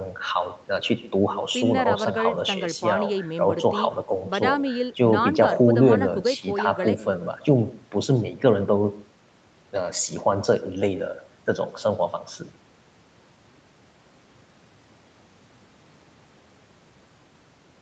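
Throughout the speech, each phrase is shadowed by a faint, thin copy arriving about 150 ms later, roughly 20 dB below the voice. This is echo with no canceller: the far end's loudspeaker leaks into its microphone, and nothing removes it before it returns.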